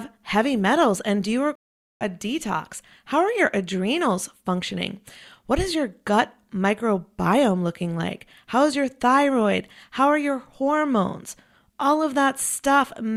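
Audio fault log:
1.55–2.04 s stream reconnect: about 0.45 s of silence, then the speech resumes roughly 0.4 s further on, skipping material rather than pausing like a plain dropout.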